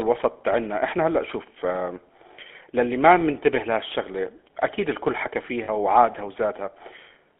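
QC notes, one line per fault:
throughout: GSM full-rate codec. The speech is plainly buzzy and gravelly, with a rough, reedy edge. The codec rebuilds the voice from a vocal-tract model driven by sparse, regularly spaced pulses, so fine detail in the excitation is thrown away. The bitrate points to 13 kbps. The line band runs from 250 Hz to 3.4 kHz, so the lows are thin and nothing bright survives above it.
5.64 to 5.69 s: lost GSM frames. About 40 ms of speech drops out, which fits two lost frames. The decoder fills the gap by repeating the last good frame's settings. That gives a brief rough, metallic ring in place of the missing sound. The gap is short, so the ring never fades to silence before normal decoding resumes.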